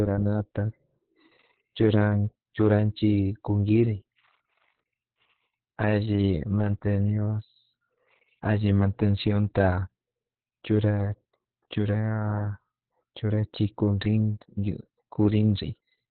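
A speech recording damaged throughout by Opus voice compression. Nothing survives above about 4.2 kHz, so it sounds muffled and narrowband. The voice is hoarse and slightly robotic from coarse SILK coding. The heavy damage points to a very low bitrate, around 6 kbps.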